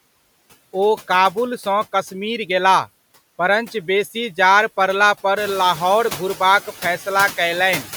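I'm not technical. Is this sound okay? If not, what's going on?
No. There are noise suppressor artifacts throughout. A cleanup filter is pushing the background hiss down hard, but only in the pauses. So the hiss drops away between words and comes back underneath them. The room's own background noise gets louder around five and a half seconds.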